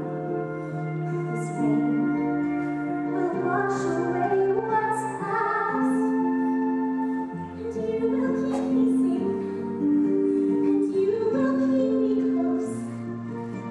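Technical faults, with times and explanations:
3.05 to 4.75 s and 11.08 s to the end: Bluetooth SBC bit pool drop. The treble dulls and a gritty noise rises. This fits the link throttling SBC from bit pool 31 to 13, near 94 kbps, starving the upper sub-bands and coarsening the rest.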